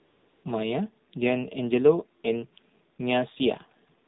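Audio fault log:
Throughout: AMR narrowband mobile codec. The speech has no content above 4 kHz, so it sounds boxed-in and telephone-like, and the coding damage is plainly audible as a buzzy, synthetic edge on the voice. AMR-NB rebuilds each 20 ms frame from a vocal-tract filter driven by a handful of pulses, and the coarseness heard here fits one of its lower modes, around 7.4 kbps, where that pulse excitation can no longer capture natural detail.
0.00–0.44 s, 2.96–2.98 s, 4.06–4.08 s: AMR comfort noise. At these points the transmitter judged the talker silent and stopped sending speech frames, so the receiver filled the gap with generated noise built from a rough level and spectrum estimate. The opening 435 ms is a smooth, steady hiss instead of the real background. The 20 ms gap near 2.96 s and the final 25 ms are brief switches into that same synthetic floor.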